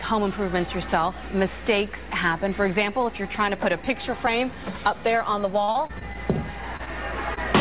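From 5.64 to 6.17 s there is repeated packet loss (robotic sound): five holes, the longest 36 ms, with about a quarter of the stretch synthesised by extending the preceding audio. The rapid succession of patches makes the sound choppy, with fragments missing.

Two single instances of short concealed packet loss follow, at 6.77 to 6.81 s and 7.35 to 7.38 s, each about 20 ms of lost audio bridged by continuing the last sound and then crossfading back. Each is heard as a brief smear or wobble. The call audio is band-limited, with nothing above 4 kHz, and fits G.711 mu-law.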